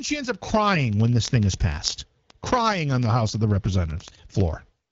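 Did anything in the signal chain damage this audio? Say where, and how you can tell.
Yes. Word clock ticks run through the speech from 0.10 s to 4.90 s, sharp clicks roughly every 30 ms. A receiving device on an unlocked clock, off by roughly a tenth of a percent, drops or repeats one sample each time the clocks slip, giving about 200 ticks.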